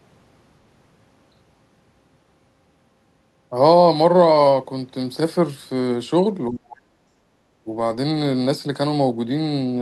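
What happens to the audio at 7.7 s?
Speech suppressed in double talk, 7.64 to 7.68 s: the speech briefly dips by around 15 dB, likely an echo canceller ducking both sides during overlapping talk.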